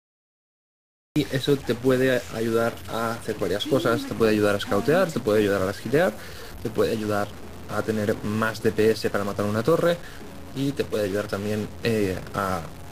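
The audio sits in digital silence until 1.16 s, then jumps straight into a sound already under way: a cut-off start, unlike a fade-in, with no attack. Throughout, a distortion follows the waveform and fills quiet passages with noise rather than steady hiss, likely from a stuck bit in the converter or data path.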